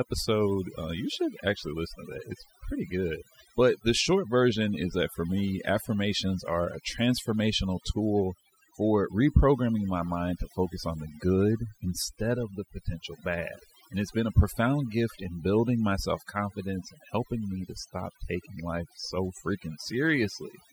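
From start to finish, the speech carries the marks of overdone noise removal. A noise reduction stage was pushed too hard on a noisy recording. Frequency bands that sat close to its noise estimate were cut deeply or shut off entirely. Softer parts of the voice fell under that line and were removed too. Between phrases the background drops away, breaking up into twinkling, warbling specks.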